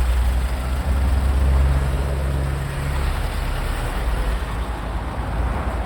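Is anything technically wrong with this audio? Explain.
No, nothing in this recording of sounds stood out as technically wrong on listening.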